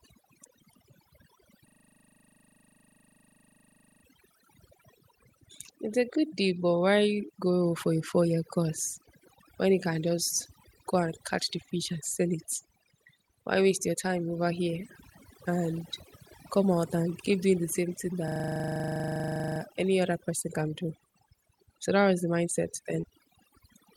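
Speech recorded over a noisy background shows overdone noise removal for the full length. Whenever a frequency band sat near the suppressor's noise estimate, it was pulled almost to nothing, taking the quieter parts of the voice with it. The result is near-silent gaps sprinkled with twinkling artefacts. A system hang loop occurs from 1.68 to 4.04 s and again from 18.28 to 19.6 s. While processing stalled, the audio hardware kept replaying the same 40 ms buffer, producing a rigid 25 Hz buzzing stutter that fits a small ring buffer cycling unattended. Little or no audio appears to be lost; playback resumes where it stopped. Short concealed packet loss occurs between 23.01 and 23.05 s. About 20 ms of audio never arrived, and the decoder patched the gap by extending the preceding sound before blending back, which leaves a brief smeared wobble.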